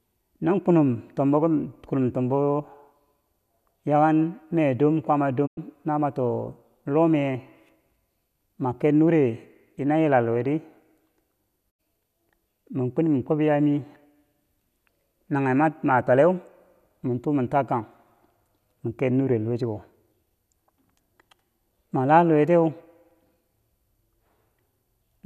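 Two digital broadcast dropouts in this speech, at 5.45–5.59 s and 11.69–11.81 s. Each time, the receiver lost good frames and muted with a quick 20 ms fade. The gaps are consistent with a few 24 ms frames going missing.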